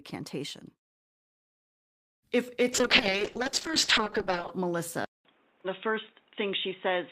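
At 0.50 s there is a single sharp click in the speech. It is a brief jump in the waveform, likely from dropped samples. Only a fraction of a millisecond is missing. Nothing audible is lost, but the step itself snaps.

From 2.37 s to 4.05 s a jitter buffer slow-down stretches the speech. The receiver repeated short stretches of signal to rebuild its reserve. Playback runs at about 97% speed and gains 62 ms. Sounds drag slightly, but the pitch stays the same.

From 2.73 s to 4.58 s a call bitrate drop degrades the sound. The encoder went from 32 kbps to 6 kbps and stayed at its lowest for about 1.75 s. With so few bits, coding turns coarse. The speech sounds rough, watery and dulled.

At 5.05 s there is about 200 ms of silence. After it, the sound is narrower to the end. It turns dull and boxy. A new noise floor sits about 35 dB below the speech. The level stays about the same. The likely cause is an input switched to a poorer device.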